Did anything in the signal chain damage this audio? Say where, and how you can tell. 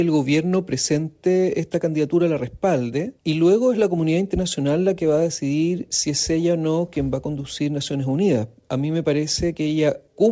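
Yes. Between 6.52 and 8.12 s the sound picks up brief ticks, smears and small hiccups, about ten of them, each no longer than roughly 15 ms, while the sound stays clear around them. These are scattered short gaps at the network stage. Packets arrived lost or late, and the receiver covered each hole by extending the preceding sound. Only around 100 ms was patched in total, so the damage is scattered rather than a dropout.

From 7.97 to 9.64 s the sound drags. It plays at about 94% speed with its pitch unchanged, and sustained parts stretch out. That points to a jitter buffer slow-down in the receive buffer. With its reserve running low, the buffer repeated single pitch periods and slices of quiet to build up delay, adding 100 ms across that span. The G.722 call path is audible in the absence of anything above 8 kHz.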